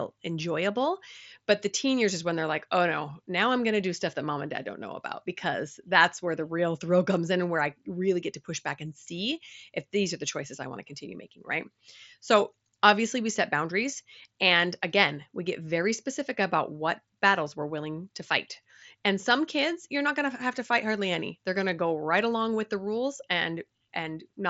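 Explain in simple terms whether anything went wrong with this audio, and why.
Nothing went wrong here: listening through this speech recording, nothing stood out as a problem.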